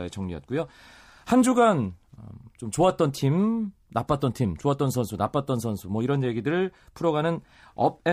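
No technical faults occur anywhere in the clip, so there are none to describe.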